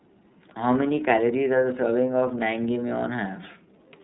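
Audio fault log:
Throughout, iLBC codec: the speech sounds clear but rough and slightly synthetic, with nothing above about 3.8 kHz. Each frame's excitation is coded on its own at a narrowband rate, which points to iLBC's 13.33 kbps mode with 30 ms frames.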